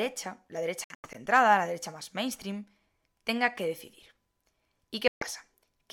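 Speech, with two stretches where the sound just cuts out, likely a Bluetooth dropout: holes totalling about 168 ms scattered over 0.84–1.16 s (longest about 91 ms) right before "la derecha más mainstream", then about 137 ms lost at 5.08–5.25 s, each picking up later as if it had played on.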